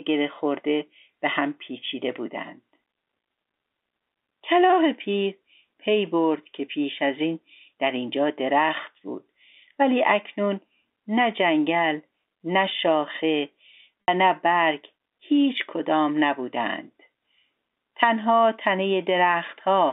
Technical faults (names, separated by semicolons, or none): packet loss with pitch repetition